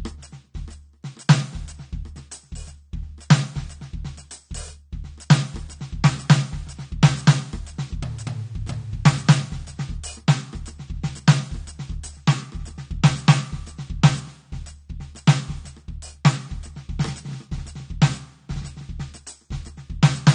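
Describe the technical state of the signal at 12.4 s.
At 12.4 s the music shows the same damage it carries for the whole clip: nothing reaches above 9.7 kHz, and sustained material sounds dull and smeared, with a warbling, fizzy texture. The likely cause is AAC compression. An AAC-LC encoder starved of bits lowers its cut-off and quantises the remaining bands coarsely, leaving spectral holes. The strength of the artefacts fits a low bitrate around 32 kbps.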